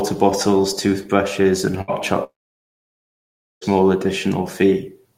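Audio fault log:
1.81–1.91 s, burst of packet loss: for about 64 ms the receiver repeats the last fragment of the voice, heard as a brief held sound that sinks in level before speech resumes. About 60 ms of the original is skipped. On a spectrogram the spectrum freezes into straight, fading horizontal bands; the waveform shows a short, repetitive, decaying stretch with an abrupt join where real audio returns.
2.24–3.64 s, long network dropout: the voice stops, a short fading buzz or hiss of concealment follows, and then about 1.31 s of near-silence remains before speech comes back, having jumped past roughly 1.38 s of material. This is likely a dropout in the network path. On the spectrogram, a brief smear of frozen spectrum gives way to a dark, almost empty block. The waveform collapses to a flat line until a hard restart.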